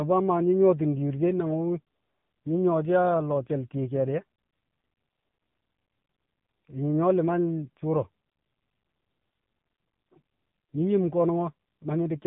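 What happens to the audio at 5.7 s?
At 5.7 s the speech is passing through an AMR narrowband mobile codec, as it does for the whole clip. The encoder rebuilds the voice from a vocal-tract model fed by a few pulses per short subframe, and heavy damage here points to a low mode, which fits about 6.7 kbps. Nothing above 3.8 kHz survives, so the speech sounds muffled, thin and phone-like, with a buzzy, synthetic edge.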